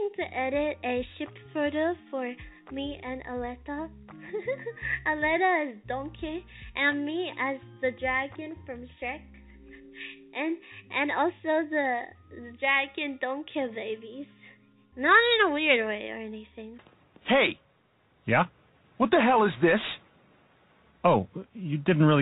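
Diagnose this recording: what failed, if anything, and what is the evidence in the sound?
Nothing failed; the call path stops at 4 kHz.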